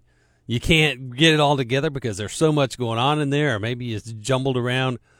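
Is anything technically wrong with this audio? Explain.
No, nothing technically wrong stood out on listening to this speech clip.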